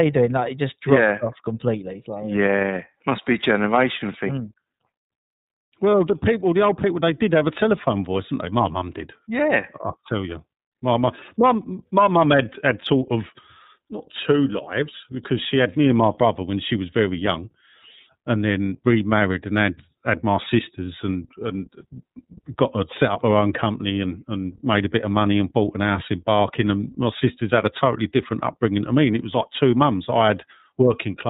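From start to finish the speech sounds narrow and boxed-in, with nothing above 4 kHz, and it carries a plainly audible rough, slightly synthetic edge. This is iLBC codec damage. The iLBC codec passes only the narrowband range and codes each frame's excitation on its own, without drawing on the previous frame. The coarseness points to the 13.33 kbps mode, which fits 30 ms frames.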